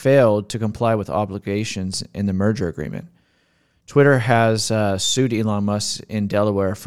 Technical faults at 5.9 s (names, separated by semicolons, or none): none